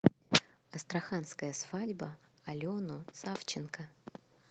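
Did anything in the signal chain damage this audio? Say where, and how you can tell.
No, nothing in the signal chain stood out as damaging this speech on listening.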